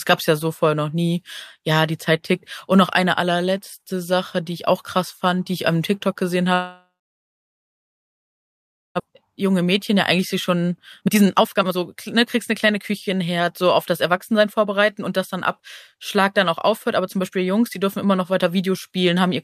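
A speech clip with two linked faults. From 6.53 s to 9.02 s there is a long network dropout, most likely the cause. The last sound smears into a fading buzz. Then about 2.1 s of near silence follows. When the speech resumes, about 1.6 s of it is simply gone. The receiver's delay grows by roughly 0.7 s across the gap. From 9.09 s to 14.82 s comes a jitter buffer speed-up. The buffer now holds too much audio, so the receiver cuts tiny pitch-period slices again and again. The speech runs at about 114% speed and sounds hurried, but its pitch stays the same. Roughly 0.7 s is trimmed this way, which wins back the delay added by the dropout.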